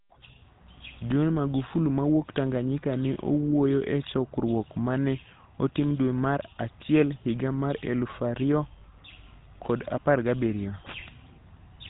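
Speech heard through the GSM full-rate codec. It has a buzzy, gravelly roughness, and a spectrogram shows nothing above 4 kHz, which fits a 13 kbps GSM stream. A lost GSM frame at 3.14 to 3.18 s leaves a brief metallic ring, which fits a single concealed 20 ms frame. On a spectrogram it appears as a smeared, repeated slice of spectrum.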